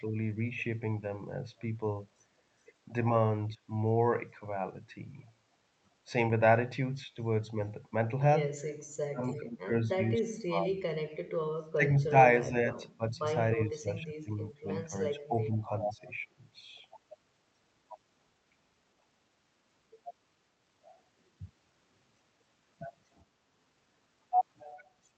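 Speech suppressed in double talk appears first at 3.49 to 3.58 s as a brief, shallow dip of roughly 5 dB, then returns much harder at 8.97 to 10.75 s, 11.56 to 13.23 s and 13.56 to 16.27 s. In those stretches the speech sinks by roughly 35, 25 and 20 dB. The likely cause is the far end talking at the same moment, so the echo canceller could not tell this talker from loudspeaker echo and attenuated both.

Echo leak follows at 24.77 to 24.84 s as a faint, short scrap of the speech returning about 412 ms late and roughly 30 dB below it. This points to a loudspeaker on one side whose echo canceller likely failed to remove everything its microphone captured, so a small residue was sent back down the line. Heard through the Opus path, whose audio band stops near 8 kHz, the echo comes through as a delayed ghost.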